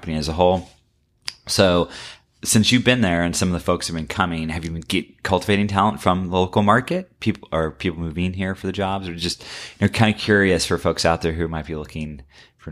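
No technical faults can be heard in this recording.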